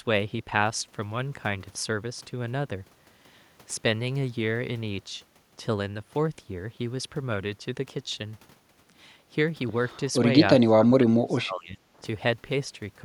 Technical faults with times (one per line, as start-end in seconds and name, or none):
10.66-12.02 speech suppressed in double talk